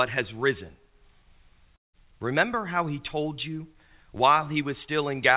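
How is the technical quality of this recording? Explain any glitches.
The recording has one clear glitch: a gap in the speech, carried over a narrowband call path with nothing above 4 kHz. From 1.76 to 1.96 s, the likely cause is a long network dropout. About 180 ms of audio never arrived, so the receiver stretched the last sound into a fading buzz before dropping to near silence. The speech then resumes with that portion missing.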